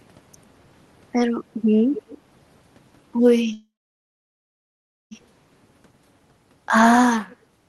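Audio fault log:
1.95–2.18 s and 7.30–7.36 s, echo leak: the far end's canceller likely let loudspeaker pickup through, returning a faint copy 235 ms late, about 20 dB down, then much fainter.
3.53–5.13 s, call audio freeze: packets likely stalled and the jitter buffer emptied, so sound trails into about 1.43 s of silence, then resumes with nothing lost, just 1.58 s later.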